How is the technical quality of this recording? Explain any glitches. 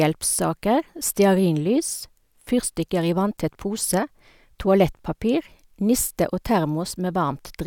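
The recording has one glitch, a gap at a join of encoded pieces, at 3.37 s, right after "fyrstikker i". The speech was encoded as separate 10-second pieces joined without trimming each run's start delay and end padding, leaving a silence of about 8 ms. The speech cuts off, then resumes exactly where it stopped.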